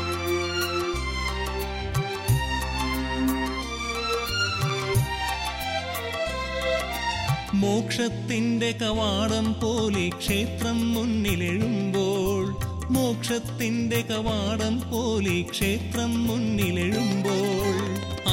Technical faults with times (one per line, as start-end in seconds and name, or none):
none